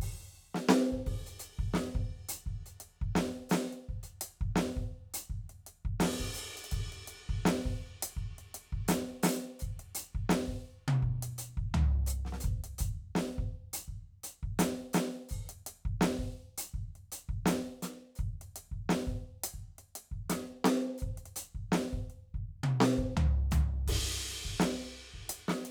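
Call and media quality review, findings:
Nothing stood out on listening to the music clip, and no fault was found to log.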